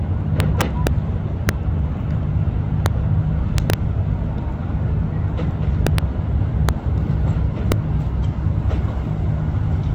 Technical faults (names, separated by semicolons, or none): integer overflow